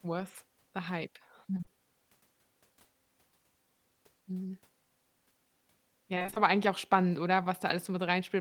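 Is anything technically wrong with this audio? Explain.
Yes, there are two kinds of fault. Short concealed packet loss occurs at 1.57, 1.61 and 1.64 s, just after "worth the hype". Three roughly 20 ms holes were patched by extending the preceding sound, giving a brief smear. Repeated packet loss (robotic sound) occurs between 6.15 and 6.38 s. Six gaps, the longest 22 ms, were concealed in quick succession, covering about half that span and producing choppy speech with pieces missing.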